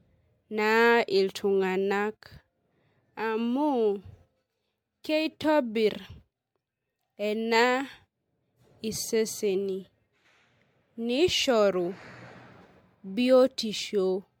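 Throughout, the speech sounds swirly, hollow and smeared, with blurred attacks: generation loss, likely from about five passes of MP3 encoding, consistent with 96 kbit/s.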